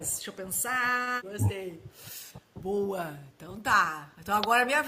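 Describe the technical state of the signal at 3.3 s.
From 3.26 to 3.31 s the speech briefly dips by roughly 15 dB, most likely speech suppressed in double talk, with the echo canceller ducking everything while both ends talked.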